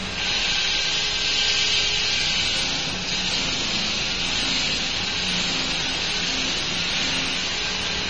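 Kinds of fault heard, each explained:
AAC compression: The sound is dull and smeared, with nothing above 9.2 kHz and a plainly audible warbling, fizzy texture on sustained sounds throughout. This is likely AAC-LC coding at a low bitrate, on the order of 24 kbps. At that rate the encoder drops the top band, leaves gaps in the spectrum and quantises coarsely against its hearing model, which turns steady detail into unstable, watery artefacts.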